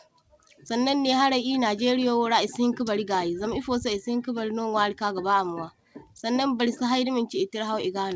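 Nothing's wrong here: the speech just came over a call link, and the top end stopping at 8 kHz fits a wideband codec like G.722 doing its ordinary job.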